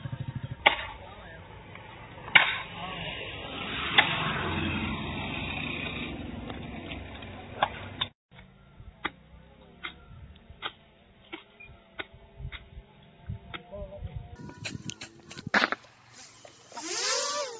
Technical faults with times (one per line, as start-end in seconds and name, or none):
14.36-17.59 wrong sample rate